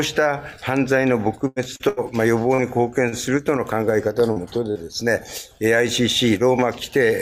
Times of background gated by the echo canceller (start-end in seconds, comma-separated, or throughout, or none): none